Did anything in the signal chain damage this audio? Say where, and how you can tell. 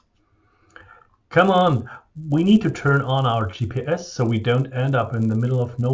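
Yes. The damage is in the sample-rate conversion stage, where the resampler restarted on every block. Each 10 ms block was converted on its own, so the filter lacked the true neighbouring samples at every edge, which fits a 24 kHz to 16 kHz conversion. The small error at each boundary repeats 100 times a second, so throughout the speech there is a 100 Hz buzz riding on the signal that drops away in the pauses.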